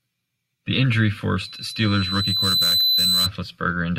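A single piercing tone at 4 kHz rises out of this speech clip from 1.39 s, swelling over roughly a second and a half until it stands about 5 dB above the voice, then stops at 3.31 s. That is loudspeaker feedback squeal: the microphone was hearing the loudspeaker it was driving, and at 4 kHz the round trip returned more than it sent, so that frequency fed on itself and kept climbing.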